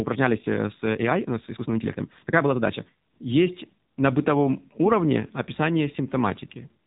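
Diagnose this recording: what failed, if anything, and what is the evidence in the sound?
AMR narrowband mobile codec throughout, at the codec stage: nothing above 3.8 kHz and plainly buzzy, synthetic speech, which fits AMR-NB at a low rate near 7.4 kbps.

Time-stretched section from 0.00 to 3.22 s: speech runs about 1.54 times fast, choppy and rushed at unchanged pitch, likely from software dropping short pieces during processing.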